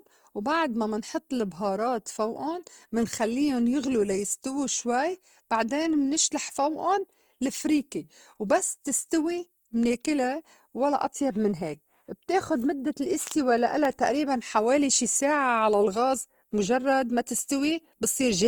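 Throughout, the speech turns grainy and rough yet stays fullband without MP3-style swirl, likely Opus compression in CELT mode, fitting a 24 kbps rate.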